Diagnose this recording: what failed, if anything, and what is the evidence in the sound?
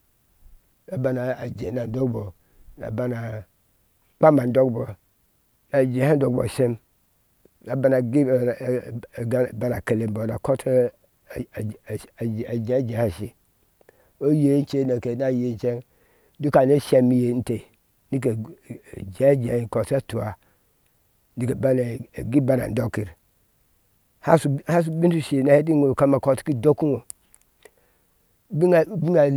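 Nothing in this speech recording points to a failure at any stage, so there's no fault to diagnose here.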